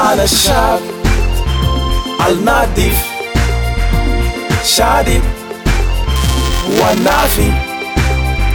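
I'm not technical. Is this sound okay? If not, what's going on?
No. From about 6.16 to 7.39 s there's buffer tearing, a steady robotic buzz near 375 Hz. The playback got out of step, so each tiny chunk, which fits a 128-sample buffer, includes a sliver of sound from a few milliseconds earlier, and every join clicks.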